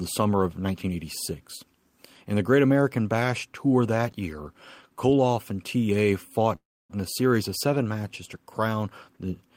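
From 6.55 to 6.92 s a call audio freeze inserts a fading buzz and 0.29 s of silence, likely from delayed packets; speech resumes, nothing lost.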